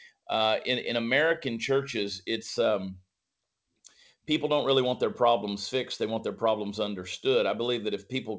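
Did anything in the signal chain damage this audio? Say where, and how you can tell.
No, nothing in the signal chain damaged this speech.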